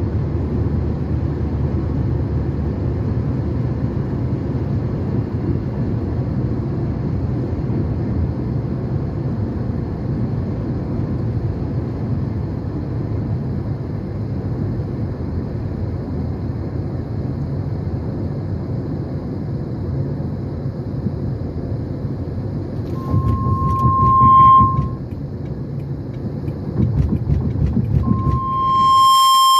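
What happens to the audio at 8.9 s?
Nothing goes wrong at 8.9 s; the audio plays through that moment intact, with no audible fault.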